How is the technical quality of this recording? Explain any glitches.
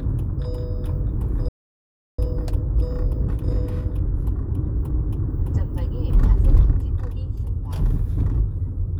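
The recording has two linked playback faults: a stall followed by a stretch of time-compressed catch-up.

At 1.48 s the sound cuts out mid-flow and stays silent until 2.19 s, roughly 0.7 s. This playback stall was likely the player running out of buffered data or having its output thread blocked, leaving nothing to send until it recovered.

From 2.19 s to 5.19 s comes time-compressed catch-up. The player works off its backlog by removing short slices and cross-fading the joins, running about 1.15 times faster. Pitch stays unchanged, but the sound is audibly hurried.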